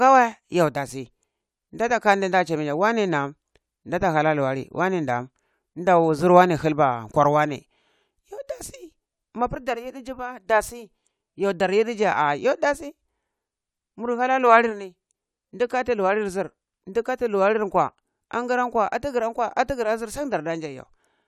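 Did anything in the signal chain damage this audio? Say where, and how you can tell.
No, nothing in the signal chain has audibly damaged this speech recording. No stage, from the wiring to playback, leaves any trace that a listener can point to at any moment in the clip.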